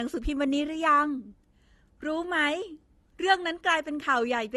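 Speech showing transcoding between lossy codecs throughout: layered artefacts from both codecs heard together, likely AAC then Opus at modest bitrates, with a spectrogram showing nothing above 15.6 kHz.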